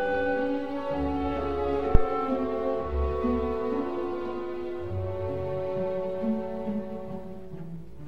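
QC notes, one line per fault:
1.95–2.09 s: phantom power thump. A supply switched on a live input sends a voltage step through the coupling capacitors, producing a deep low-frequency thump peaking near about -4 dBFS. Most of its energy dies away within roughly 32 ms, leaving a short tail.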